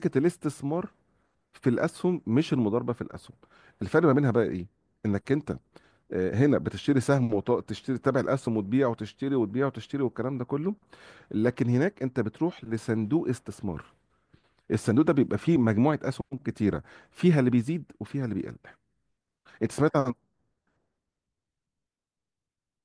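No technical faults turn up anywhere in this recording, so there is nothing to set out in time order.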